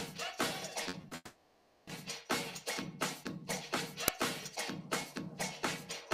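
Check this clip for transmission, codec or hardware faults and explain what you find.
Yes, there are three faults, two network-related and one on the playback side.

From 0.83 to 1.13 s there's repeated packet loss with the robotic sound. Four short gaps land in that stretch, the longest 40 ms, and each one gets patched by stretching out the last bit of audio. That concealment covers about a third of the span, 100 ms in all, so you hear choppy, robotic-sounding audio with pieces missing.

Right after, from 1.15 to 1.89 s, the audio gives way to a continued buzz or hiss that fades out, ending in about 20 ms of silence before the sound returns further on, with that stretch gone. That's most likely a long network dropout: nothing arrived for roughly three quarters of a second, and the receiver filled 720 ms by carrying the last sound forward.

At 4.08 s there's a brief crack lasting about 2.9 ms. 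That points to an uninitialised buffer, where a block got played before any audio was written into it, so leftover memory went out as samples. The length fits a 128-sample buffer.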